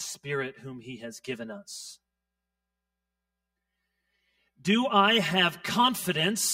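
From start to end the audio has channel delay (comb filtering): one side arrives around 5 ms late, so summing to mono cancels near 100 Hz and at evenly spaced steps above. That gives a hollow, phasey tone whose notches stay fixed, unlike flanging's sweep or a room's smeared tail.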